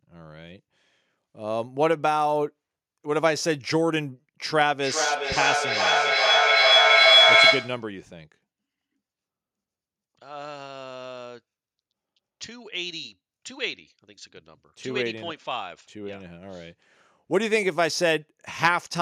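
Feedback echo between two devices, 4.51 to 7.96 s: another device replays speech, repeating roughly every 0.4 s and swelling to about 8 dB above it.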